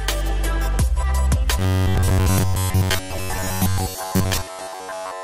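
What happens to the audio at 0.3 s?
Nothing goes wrong at 0.3 s: the audio plays through that moment intact, with no dropout, click or distortion.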